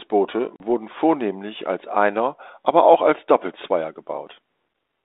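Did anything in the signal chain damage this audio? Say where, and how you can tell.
Yes. At 0.56 s the speech drops into a hard-edged silent hole, and at 0.63 s it returns with brief distortion before settling. This is packet loss on an ADPCM call, at the network stage: about 40 ms was lost, roughly two packets. The 32 kbit/s G.726 decoder's adaptive predictor and step size fell out of step with the sender's and needed tens of milliseconds to recover.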